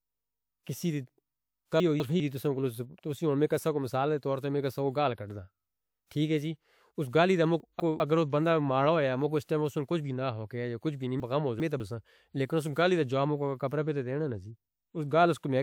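At 1.8 to 2.2 s the speech jumbles briefly. These are chunks out of order: a 200 ms block plays one position late, after the block that should follow it. At 6.07 to 6.11 s a short hiss creeps in about 45 ms before a sharp attack, which sounds softened. This is pre-echo, where a transform codec spread its quantisation noise across the whole block, into the quiet lead-in. The same 200 ms swap recurs at 7.6 to 8.0 s. A 51 ms pre-echo smear precedes an attack at 9.44 s. At 11.2 to 11.8 s a longer scramble occurs, with one block arriving two positions late.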